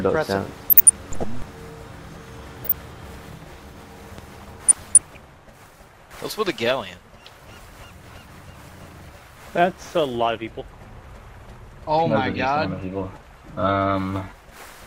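Short blips of noise sit over the sound from 0.54 to 1.24 s and again from 2.62 to 2.77 s. This is DAB burbling: under a fraction of a percent of bit errors slipped past error correction, putting short blips of noise in single sub-bands. A sharp pop about 10 dB above the sound follows at 4.18 to 4.21 s, a loud pop likely from a voltage spike such as a switch or static. Burbling returns from 4.67 to 5.21 s.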